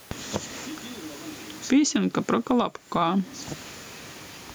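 Throughout the speech, the level breathes with gain pumping, a swing of roughly 15 dB, while the speech itself sounds squashed and flat in dynamics. The likely cause is input gain set far too high with a fast limiter clamping it down. On a waveform the peaks sit at a near-constant ceiling; on a spectrogram the room noise sits about 43 dB below the speech.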